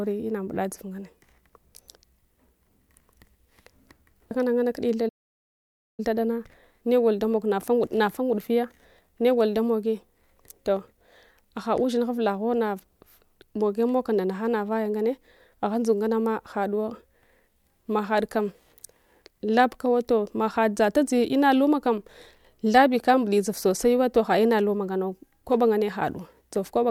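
At 5.08 s the speech stops dead for about 0.9 s, a playback stall, likely from the player starving for data; the waveform flatlines until 6.00 s.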